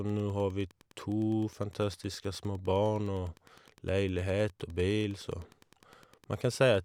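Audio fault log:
throughout, Wi-Fi interference. A faint, regular ticking sits under the speech for the whole clip, roughly 35 dB below it. The ticks repeat every 102.4 ms, close to ten per second. That spacing is the beacon interval of a Wi-Fi radio. A transmitter near the audio circuit radiates each beacon burst, and the circuit rectifies it into the audio path. Each burst becomes a short click, so the beacons form an even pulse.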